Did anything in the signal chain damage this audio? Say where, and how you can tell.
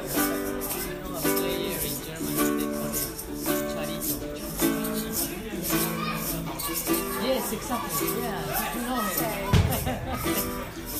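No, nothing in the signal chain damaged this audio.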